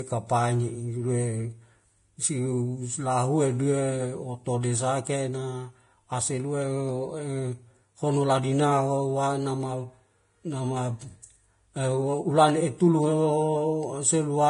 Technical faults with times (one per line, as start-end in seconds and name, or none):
0.00-14.49 Vorbis compression